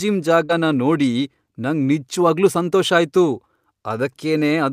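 Right at 0.45 s there's a short concealed packet loss: about 40 ms went missing, and the decoder papered over it by stretching the previous sound, so you get a quick smear. Then at 0.49 to 0.51 s, a 20 ms lost packet rebuilt from error correction kicks in, using the low-bitrate copy from the next packet, which sounds rough and noisy just before "ನೋಡಿ ನಂಗ್ ನಿಜ್ವಾಗ್ಲೂ ಸಂತೋಷ".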